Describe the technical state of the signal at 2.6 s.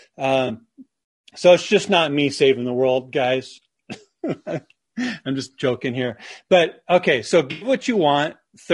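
At 2.6 s, as throughout, the speech sounds rough and grainy. This is likely low-delay AAC compression. Its coarse coding adds noise between pitch harmonics at a rate near 32 kbps.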